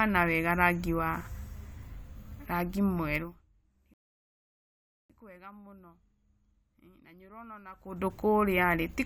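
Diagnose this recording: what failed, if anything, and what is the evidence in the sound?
The failure is a rebuffering stall at the playback stage. At 3.94 s the speech drops to silence and resumes at 5.10 s exactly where it stopped, adding 1.16 s. The player's buffer ran dry and waited for data. Waveform and spectrogram show a flat, empty gap with no missing content on either side.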